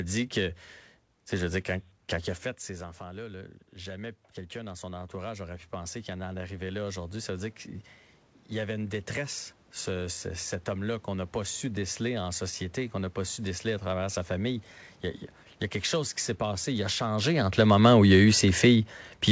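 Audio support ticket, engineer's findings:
Automatic gain rising, 2.1 to 7.56 s: after "sais je dis quand", voice level drops about 14 dB as the talker moves back, then voice and room noise swell together over about 5 s. AGC compensating by ramping gain roughly 10 dB.

Automatic gain falling, 17.24 s to end: talker moves, then the sound sinks steadily along with its background. AGC pulls gain down gradually, audible through the band-limited call path with nothing above 8 kHz.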